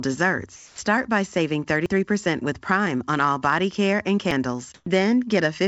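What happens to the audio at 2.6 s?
Nothing goes wrong at 2.6 s; the speech carries on intact through the call path, which passes nothing above 8 kHz.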